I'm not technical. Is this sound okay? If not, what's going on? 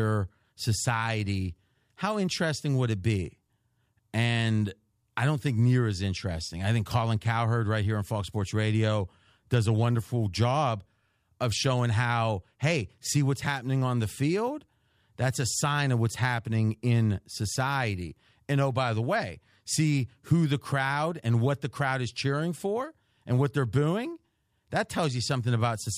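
Yes, nothing wrong can be heard in this recording.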